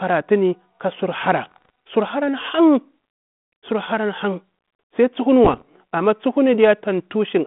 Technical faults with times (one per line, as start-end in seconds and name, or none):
1.45-1.70 bit errors on an ADPCM link
5.44-5.62 bit errors on an ADPCM link